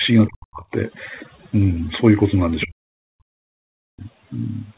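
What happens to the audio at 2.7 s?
Speech suppressed in double talk begins at 2.65 s and runs to 4.02 s. Both ends of the call were likely talking at once, so the echo canceller could not separate the talker from the loudspeaker echo. It turned everything down. The speech dips by up to about 40 dB and drops out in pieces, for roughly a second in total.

Just before that, from 2.61 to 2.65 s, the other side's voice leaks through. It is a brief scrap about 15 dB below the speech. The likely cause is loudspeaker echo that the canceller failed to remove from the microphone.

Overdone noise removal also runs through this moment. An over-strong noise reducer shuts off frequency bands it mistakes for noise, and quiet parts of the speech go with them. The background drops and breaks up into twinkling specks.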